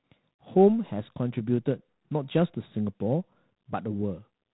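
From start to end the speech carries G.726 ADPCM damage: a harsh, rasping hiss that rises and falls with the speech level, which fits the coarse 24 kbit/s mode, with nothing passing above 3.9 kHz. Unlike perceptual codecs, there is no swirling or warbling, only level-tracking grit.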